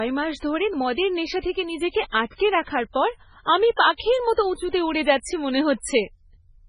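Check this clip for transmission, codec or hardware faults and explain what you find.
One fault runs through the whole recording: MP3 compression, with heavy codec damage. Nothing is left above 10.5 kHz, and the speech sounds watery and swirly, with metallic chirps on sibilants and smeared onsets. The likely cause is an encoder starved of bits, which fits a very low bitrate around 16 kbps. It cuts the treble at a fixed point and drops weak frequency lines that flicker on and off between frames. A plain low-pass filter would only dull the top, without these shifting, bubbling artefacts.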